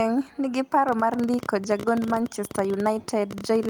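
Speech with a train of clicks starting at about 0.89 s and running right to the end: roughly 15 clicks a second, all much the same shape but spaced unevenly, ticking over the voice and through the gaps too, with peaks poking a bit above the speech level. That pattern points to likely interference from nearby gear or a faulty connection or power supply. Between 2.09 and 2.19 s there's also a lost packet rebuilt from error correction. A few packets went missing, and the decoder filled in about 60 ms from the low-bitrate backup copies each following packet carries. So there's no dropout, but that stretch sounds rougher and noisier than the surrounding speech.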